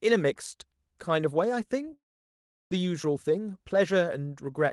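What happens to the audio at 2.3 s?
At 2.3 s the sound has dropped out. From 1.93 s to 2.74 s the last bit of speech trails off into a short fading buzz, then goes quiet for roughly 0.7 s before the talking picks up again with a piece missing. This is most likely a long network dropout: packets stopped arriving for about 0.8 s, the receiver briefly stretched the final sound to cover the gap, then gave up and played silence until real audio returned.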